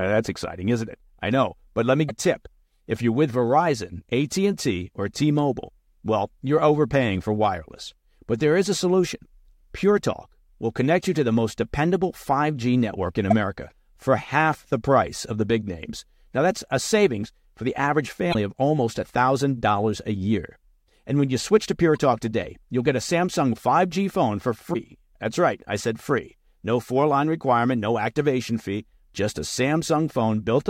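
Speech marred by damaged data in a compressed stream: brief glitches at 2.05–2.11, 13.30–13.33, 18.30–18.35, 21.96 and 24.70–24.76 s, where corrupted frames garble decoding. On a spectrogram each shows as a short vertical break.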